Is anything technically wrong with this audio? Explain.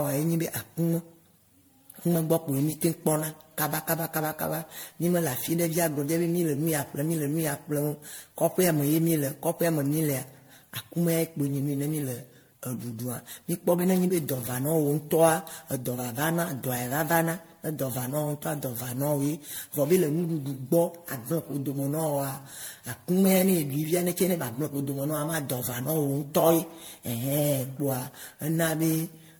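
Yes. Generation loss runs throughout this speech. It sounds swirly, smeared and hollow, with blurred attacks and nothing above 19.9 kHz. It likely comes from about ten MP3 re-encodes, consistent with 96 kbit/s.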